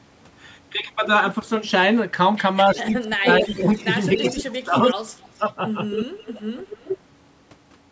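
From 2.75 to 3.69 s, and again from 4.35 to 5.44 s, the speech dips and chops, the second time much deeper, likely speech suppressed in double talk as the canceller ducks everything. A faint echo leak shows up at 2.76 to 2.92 s, then louder at 3.29 to 3.84, 4.16 to 4.43, 4.78 to 5.52 (nearly as loud as the voice) and 5.91 to 6.98 s. It is a delayed copy about 275 to 282 ms late, likely the far-end loudspeaker leaking past its canceller.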